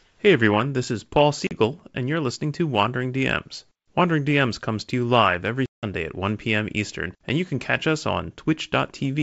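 Speech carried over a wideband G.722 link, with the bandwidth reaching up to about 7 kHz, has two bursts of packet loss on an ADPCM call. At 1.47–1.52 s a 40 ms gap, roughly a few packets, cuts to hard silence. At 5.66–5.84 s a longer 170 ms hole, around fifteen packets' worth, does the same. After each gap the decoder's adaptive predictor and step size no longer match the sender's, so the speech comes back slightly distorted before resynchronising.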